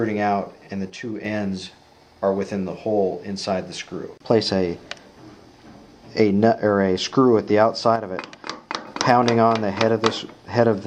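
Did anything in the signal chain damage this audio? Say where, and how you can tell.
Yes. The level falls abruptly by about 6 dB from 0.90 to 1.25 s, and again from 7.96 to 8.87 s. Each time it snaps back. This is one channel dropping out, likely from an intermittent contact in the analogue wiring. In the mono sum, shared content halves in amplitude.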